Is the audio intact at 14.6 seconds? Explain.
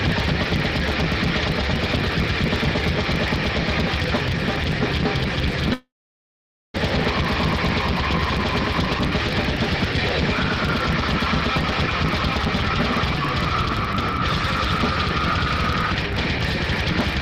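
No. At 14.6 seconds the audio carries the same filter restarted on every block fault that runs through the whole clip. The filter drops its memory at each block boundary and starts again from silence, so each block opens with a small transient. These arrive every 40 ms, giving a 25 Hz buzz whose loudness tracks the sound's level. On a waveform this shows as regularly spaced glitches; a spectrogram shows thin vertical lines repeating at that interval.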